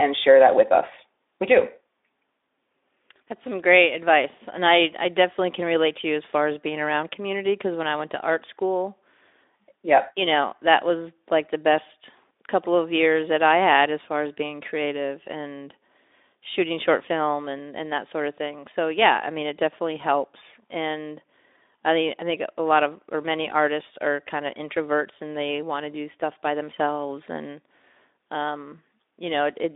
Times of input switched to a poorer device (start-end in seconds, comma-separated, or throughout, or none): none